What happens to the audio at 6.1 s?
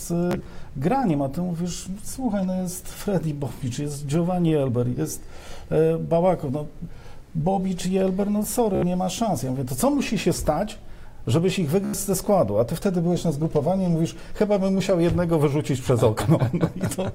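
Nothing goes wrong at 6.1 s; the audio carries on intact through that moment with no dropout, click or distortion to be heard.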